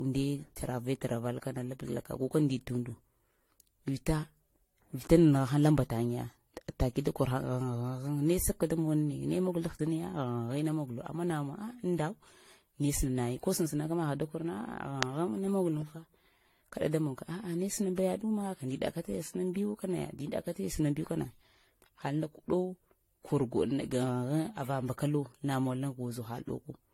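Throughout the speech, generation loss is audible: a swirly, hollow, smeared texture with softened consonant attacks and nothing above 16.6 kHz. This likely comes from around five successive lossy re-encodes, with artefacts suggesting AAC-LC at roughly 64 kbit/s.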